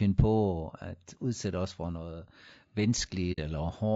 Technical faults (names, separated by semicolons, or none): low-delay AAC compression; AAC frame loss with muting